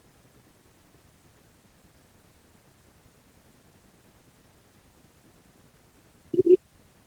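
It's a speech clip with one burst of packet loss at about 1.67 to 1.73 s. Roughly 50 ms of audio never made it, so the receiver stretched the last sound out and faded it down to cover the hole, then the speech jumps ahead with that chunk missing.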